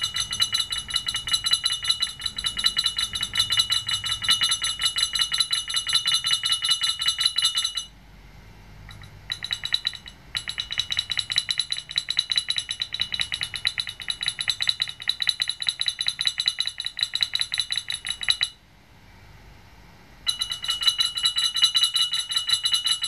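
A second capture path or misaligned edit likely causes a doubled audio track throughout, its copy trailing about 150 ms behind, about 5 dB down.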